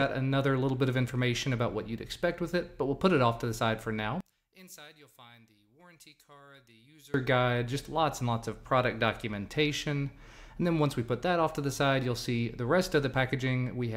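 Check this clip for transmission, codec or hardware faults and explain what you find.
One fault is audible. From 4.21 to 7.14 s the sound collapses to a faint residue, about 27 dB down, likely from one channel inverted cancelling when summed to mono; the waveform shrinks and the spectrogram goes faint.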